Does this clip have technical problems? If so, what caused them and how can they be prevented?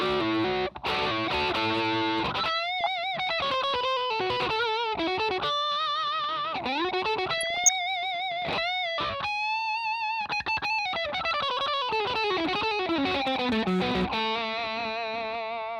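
Yes, two kinds. There's DAB burbling at 2.79 to 2.87 s and again at 7.33 to 7.76 s: weak reception let a few tenths of a percent of bits slip past error correction, so wrong samples put short blips of noise into individual sub-bands. A better antenna or stronger signal prevents it.

There's also hard clipping at 4.30 to 5.48 s, overdriven by about 2 dB, and at 11.28 to 14.14 s, by about 4 dB. Peaks got sliced flat against the limit of the stage they overloaded, so you get crackle on the peaks, harsher in the second stretch. Dropping the gain to leave headroom fixes it.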